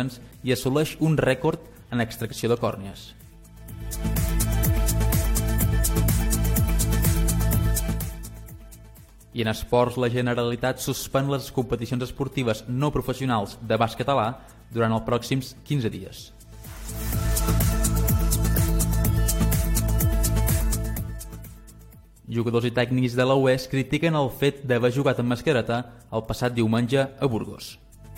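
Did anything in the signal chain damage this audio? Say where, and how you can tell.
No, no faults detected.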